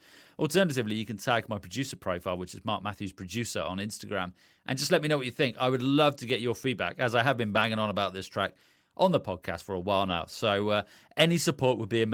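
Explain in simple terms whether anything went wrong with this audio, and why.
Brief rough, noisy patches at 7.55–7.61 s (after "as I have been") and 10.05–10.11 s (after "podcast for a while"): lost packets rebuilt from error correction. There's no gap, just coarser backup copies.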